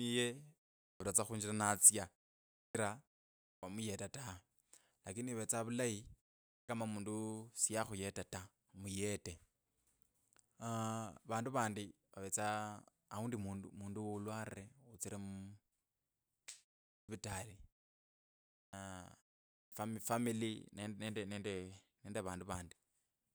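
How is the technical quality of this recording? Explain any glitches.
The recording has one recurring glitch: speech after short pauses loses its opening.

Clipped start after a pause occurs at 0.82, 2.57, 3.47, 6.52, 16.91, 18.57 and 19.54 s. After gaps of 0.3 to 0.9 s, the output device apparently sleeps and needs time to wake or relock, so about 160 to 180 ms is lost each time. Speech resumes abruptly, missing its first sounds.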